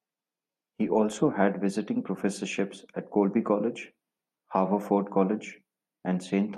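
Nothing in the speech stood out as a technical fault on listening.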